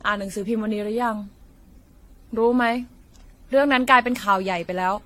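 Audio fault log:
throughout, generation loss: The speech sounds swirly, smeared and hollow, with consonant attacks blurred and nothing above 16.6 kHz. The likely cause is repeated lossy re-encoding, around seven passes, each quantising on a shifted frame grid so noise and spectral holes pile up. A single AAC-LC encode near 64 kbit/s would give the same band limit but far less of this smearing.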